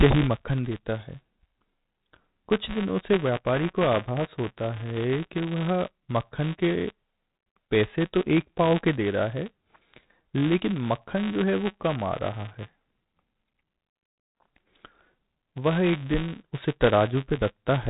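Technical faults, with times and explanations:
Throughout, buffer tearing: there's a steady robotic buzz riding on the speech at about 188 Hz, which fits a 256-sample buffer being read and written out of step. In each period a small sliver of audio, roughly 15 ms stale, gets played in place of fresh samples, with hard edges on both ends, so you hear a rattle that only shows up while there's signal. The band-limited telephone sound, nothing above 3.8 kHz, is just the G.711 path.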